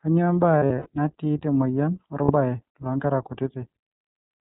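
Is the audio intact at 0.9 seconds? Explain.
No. The whole clip runs through the iLBC codec at 15.2 kbps in 20 ms frames, cutting everything above 4 kHz and leaving the speech plainly rough and synthetic.

Just before that moment, from 0.58 to 0.88 s, lost iLBC frames totalling about 160 ms, with the longest run roughly 70 ms, made the decoder repeat the last pitch cycle mixed with noise. This is heard as a held, buzzy vowel. Because each frame stands alone, the speech recovers almost immediately by 0.9 s.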